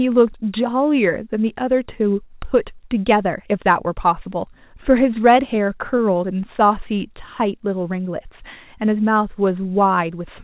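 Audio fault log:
5.14–6.41 s, scattered short gaps: about seven brief losses, each around 10 ms or less, were covered by extending the preceding sound. Concealment fills roughly 7% of this stretch and leaves small ticks and smears in narrowband audio that stops at 4 kHz.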